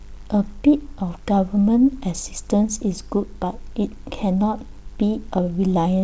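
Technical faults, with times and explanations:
No technical faults are present in this speech clip.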